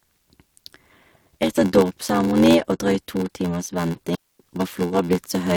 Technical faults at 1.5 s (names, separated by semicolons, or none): block size mismatch (padded)